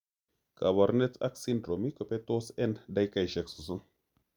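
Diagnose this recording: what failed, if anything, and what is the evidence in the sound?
Nothing failed; no stage in the chain shows an audible fault.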